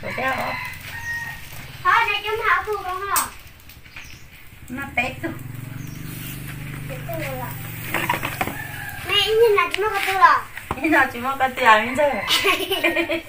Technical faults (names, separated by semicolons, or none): clock slip clicks